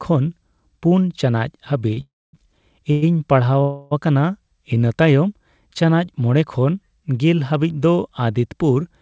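Right at 1.94 s there's a short stall from a late packet. The sound gets held about 27 ms too long, up to 1.99 s, with a faint buzzy smear where the receiver stretched what it already had while waiting. Then it picks up exactly where it left off, so nothing's lost. It's just a small hiccup in the timing.

Straight after that come three call audio freezes. The first runs from 2.01 to 2.35 s. The sound trails off into a fading buzz and then sits silent for about 240 ms of its 325 ms before resuming. The second, from 2.91 to 3.04 s, is a brief 108 ms hold. The third, from 3.62 to 3.93 s, lasts 291 ms. Neither of those two drops to silence. Each time the audio resumes from the same point, so the speech is pushed later rather than cut. The likely cause is packets held up in transit, which drains the jitter buffer. The band-limited sound, with nothing above 8 kHz, fits a G.722 call path at 64 kbps.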